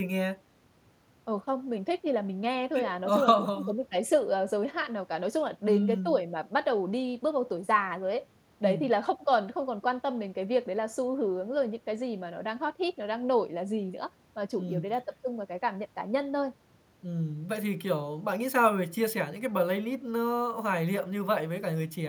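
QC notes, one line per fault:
No faults found in this recording.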